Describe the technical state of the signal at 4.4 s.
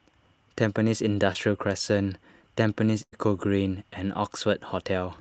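At 4.4 s the speech is intact, with no fault, only the ordinary coding character and high-frequency limit of the call path, which tops out around 8 kHz.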